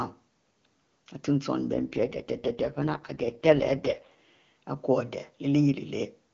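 From 1.74 s to 4.11 s the speech turns rough, raspy and noticeably synthetic, then returns to the clean HD Voice quality heard before and after. The band stays as wide as before and there is no gap. This is an AMR rate drop: the link pushed the AMR-WB codec down to a much lower mode, which fits a fall from 23.85 to 6.6 kbit/s, leaving few bits to model the voice until the rate recovered.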